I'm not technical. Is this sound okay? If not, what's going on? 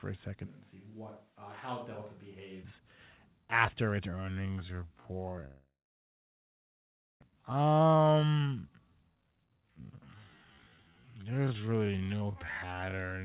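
No. The clip is speech, and several things go wrong in it.

From 0.48 s to 2.62 s, right after "a second", the voice turns distant and hollow. It gets quieter, and more room noise creeps in. This is likely a switch to a distant microphone. The close microphone's sound dropped out, and a microphone further away, such as a camera's, took over. Both the change in and the change back are sudden.

From 4.08 s to the end, starting after "after its", the speech runs at about half speed but keeps its normal pitch. This is likely a time-stretched section. Software lengthened the audio to fill a set time by repeating tiny slices of it. That keeps the pitch but slows the pace.

From 5.46 s to 7.24 s there is a long network dropout, likely caused by audio failing to arrive. The last sound trails off into a fading buzz. Then there is about a second and a half of near silence. About one second of speech never comes back. 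When the sound returns, it picks up further along.

From 7.32 s to 9.99 s the speech rushes at about 1.25 times normal speed, with no change in pitch. A shorter, milder burst follows from 11.17 s to 11.75 s at about 1.12 times speed. Both are jitter buffer speed-ups. Audio had piled up after the dropout, so the receiver cut tiny pieces out to catch up. The first burst removed roughly 0.7 s of sound.

The sound also passes through a phone-style call codec, which gives it a narrow, telephone-like tone with nothing above 4 kHz.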